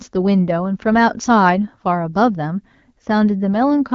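No technical faults can be heard in the speech. It comes through an AMR wideband (HD Voice) link at 12.65 kbit/s, with light coding traces and no content above about 7.4 kHz.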